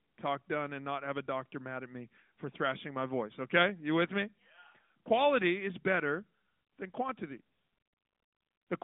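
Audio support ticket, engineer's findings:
No faults found: the speech sits in a telephone band of about 200 Hz to 3.6 kHz through an AMR narrowband mobile codec path, with light coding texture consistent with the 12.2 kbps mode.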